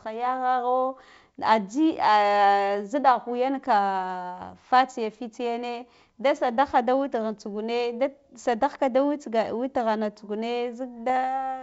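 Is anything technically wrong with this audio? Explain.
Yes, there are bit errors on an ADPCM link, heard at 4.42 to 4.55 s and again at 11.10 s. The audio has come through a G.722 wideband link, which fits the 64 kbit/s mode. A small fraction of a percent of bits got flipped. With ADPCM, a flipped bit also corrupts the decoder's step size and prediction, so the damage rings on briefly. Both events are pops and rough bursts with brief level wobbles, and the second is very short.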